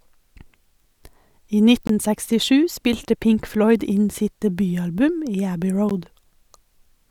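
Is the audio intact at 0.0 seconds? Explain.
Yes, the audio is intact at 0.0 seconds, with no fault audible at that moment.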